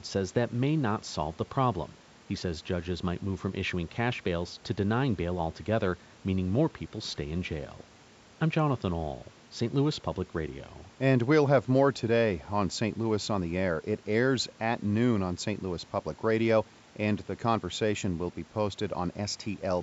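Nothing goes wrong in this speech clip, and the call microphone processing is simply doing its usual job, trimming away the deepest bass and leaving nothing above 8 kHz.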